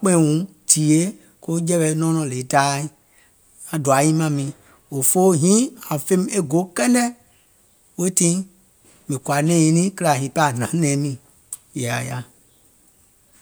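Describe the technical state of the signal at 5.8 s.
At 5.8 s the speech signal is intact, with no audible fault at that moment.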